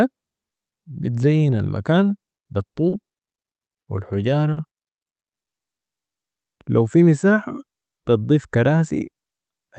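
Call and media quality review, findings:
Short stalls from late packets at 2.89–2.95 s, 3.29–3.35 s and 4.53–4.60 s. Speech briefly held with a slight buzz or dip, about 30, 30 and 40 ms of fill, nothing lost. Jitter buffer ran dry and the receiver stretched the last sound until the late packet arrived. Playout delay steps up by the same amount each time.

Burst of packet loss at 3.81–3.90 s. About 60 ms of concealment, the last sound held and fading down, then speech resumes with about 60 ms skipped. Consecutive packets lost or too late; the receiver extrapolated the last sound, attenuating it, then jumped ahead. Carried over a WebRTC call path, band-limited around 8 kHz, consistent with Opus.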